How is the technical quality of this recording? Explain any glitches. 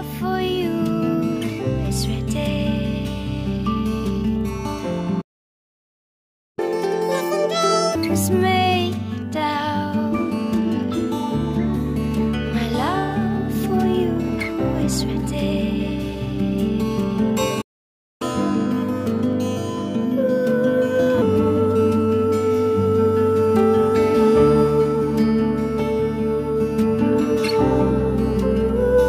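There are two real glitches here, and each one is the same pair: a playback stall followed by a stretch of catch-up at higher speed.

The first playback stall runs from 5.21 to 6.59 s. The sound just drops out mid-flow for about 1.36 s. The second one, from 17.61 to 18.22 s, is shorter, at about 0.59 s. In both cases the likely cause is the player starving for data or having its thread blocked, so the output goes silent until it recovers.

Right after each stall the player rushes through its backlog by resampling, so speed and pitch rise together. From 6.59 to 7.95 s it runs at 2x, which pushes the pitch up by close to ten semitones and sounds obviously chipmunk-like. From 18.22 to 21.22 s the catch-up is gentler, at 1.15x and roughly a whole tone higher, and it lasts longer at 3 s.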